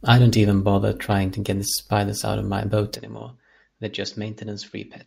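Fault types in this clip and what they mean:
Corrupt frame decoded, at 1.12 s: between "I don't even bother" and "to get spiders out" a single compressed frame with damaged bits was decoded as if it were intact. Misread gains and codes put energy at frequencies where it doesn't belong, so for roughly one frame's length a short, fairly loud blip, peaking around -15 dBFS, cuts across the speech before normal decoding resumes.
Input switched to a poorer device, from 2.96 s to the end: right after "out of my boat" the sound turns duller and drops by roughly 10 dB, with nothing above 7.6 kHz and no gap at the change. The likely cause is the recording moving to a narrower-band input, such as another microphone or a headset profile, which brings its own tone and a faint new background noise sitting about 50 dB below the speech.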